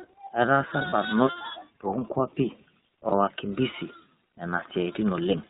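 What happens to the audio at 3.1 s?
From 3.08 to 3.13 s the speech turns briefly into a held, slightly buzzy, breathy tone, then snaps back to normal almost immediately. This is lost iLBC frames: the gap fits a single missing 30 ms frame, and the decoder covered it by repeating the last pitch cycle blended with noise. Because each iLBC frame is decoded independently, recovery is instant.

Around that moment the whole clip also carries the iLBC codec's plainly audible rough, synthetic texture, with nothing above 4 kHz surviving the narrowband coding.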